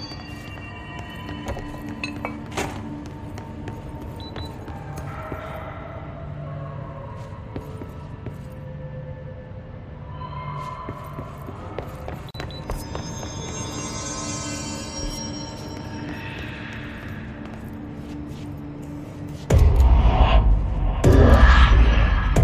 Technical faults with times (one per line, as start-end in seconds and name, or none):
12.31-12.34 gap at a join of encoded pieces